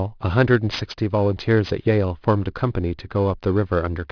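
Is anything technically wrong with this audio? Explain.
Yes. Throughout the speech, sibilants sound gritty and metallic, with harsh tones that don't belong, and the spectrum runs hard up to about 5.5 kHz. This is aliasing. The sound points to a rate drop from 24 kHz to 11 kHz without an anti-aliasing filter, so content above 5.5 kHz folded back to false lower pitches, roughly 20 dB below the speech.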